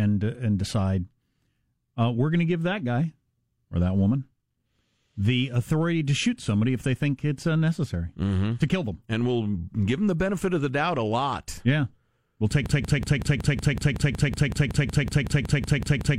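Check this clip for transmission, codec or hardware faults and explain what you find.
One transmission fault is present: a broken-record loop from 12.66 s, right after "we'll take", running to the end of the clip at 16.19 s. An identical 186 ms fragment repeats back to back about nineteen times, and the speech that should have followed is lost. This most likely comes from the player, encoder or stream stalling and re-sending the last chunk it held. Unlike an echo, the repeats never decay or overlap. Each cycle is an exact, full-level copy.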